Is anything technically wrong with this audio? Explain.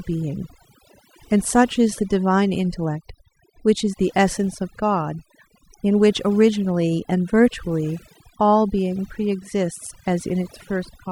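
Yes. Throughout the speech, the background drops to an unnatural near-silence dotted with small twinkling specks, and the softer parts of the voice seem to dissolve. This is overdone noise removal: a noise reduction process was applied far too aggressively, pulling individual frequency bands down or out whenever they sat close to its noise estimate. The quieter components of the speech were caught by that threshold and stripped away along with the noise.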